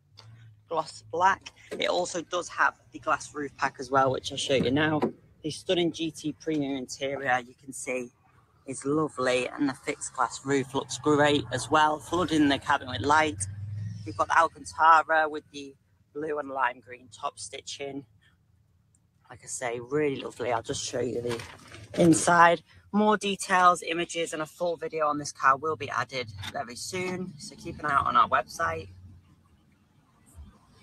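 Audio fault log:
throughout: noise suppressor applied to music or sounds. A speech-tuned suppressor treats sustained material as noise, swinging gain by around 20 dB, so the sound pumps and thins. The waveform envelope breathes irregularly, and the spectrogram shows held energy fading while onsets stay bright.
0.00–3.84, 5.12–6.47, 7.42–10.74, 13.52–19.47, 21.51–22.93, 27.30–27.83, 28.83–30.8 s: sound cut by the noise suppressor. Steady and decaying parts were judged as noise and pulled down by about 17 to 18 dB (about 9 dB at 27.3 s). The waveform sags, and spectrogram tails end abruptly.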